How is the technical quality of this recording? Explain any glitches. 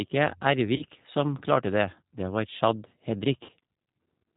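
Technical quality is held back by plainly audible low-bitrate voice coding, with two short dropouts patched over by the decoder.

Throughout, the speech has the plainly audible G.729 codec character. Everything above 4 kHz is gone, and the voice sounds slightly rough and synthetic. That fits an 8 kbit/s codec such as G.729A, which doesn't send the waveform at all. It sends a vocal tract filter, a pitch predictor and a few pulses per 10 ms frame, then the decoder rebuilds an approximation from those pieces.

The glitches are VoIP packet loss concealed by the speech codec. The first runs from 0.76 to 0.84 s and covers about 30 ms of missing audio, which points to a single lost packet. The second runs from 3.43 to 3.52 s and covers about 60 ms, roughly two packets. In both, the decoder keeps extrapolating from its last pitch and filter settings while fading the gain, so the sound smears into a buzzy tone or coloured noise that fades. 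Because each frame builds on the previous one, the voice stays weak or distorted for a moment after real packets return.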